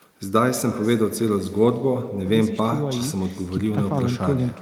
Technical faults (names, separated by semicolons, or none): echo with no canceller